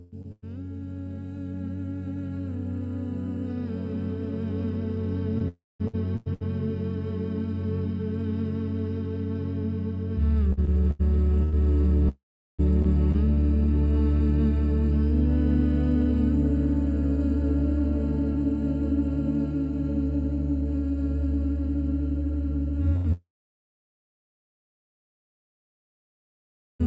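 At 0.22 to 0.26 s there is a short concealed packet loss. About 20 ms of audio failed to reach the decoder in time. The receiver extended the preceding sound across the hole and blended back in, leaving a brief smear.

Right after, from 0.32 to 0.44 s, a burst of packet loss removes about 100 ms. The patched sound decays as the gap lengthens, ending in roughly 30 ms of silence before playback resumes further on.

From 5.38 to 6.43 s, repeated packet loss (robotic sound) punches four holes. The longest is 93 ms, and patching covers about a quarter of the stretch, so the audio turns choppy. Within it, from 5.48 to 5.82 s, the fill fades into about 210 ms of silence. That is likely a long network dropout.

Repeated packet loss returns from 10.53 to 13.38 s with seven gaps, the longest 95 ms. From 12.09 to 12.61 s the patched sound dies away into roughly 390 ms of silence, likely another long network dropout.

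At 22.96 to 23.07 s a second burst of packet loss removes about 80 ms.

From 23.13 s to the end, the fill fades and about 3.5 s of silence follows, likely a long network dropout. Throughout the clip the audio is band-limited to 8 kHz by the G.722 call codec.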